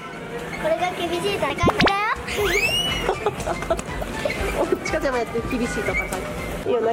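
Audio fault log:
1.5–1.8 s, chunks out of order: a 100 ms chunk was delivered late and is played two chunks after its proper place. Nothing goes missing, but the sound briefly jumbles at the three abrupt joins where unrelated chunks butt together.
3.4–3.8 s, chunks out of order: again a 100 ms chunk lands late, this time three chunks behind where it belongs. The section sounds scrambled for this span, with three hard splices between mismatched chunks.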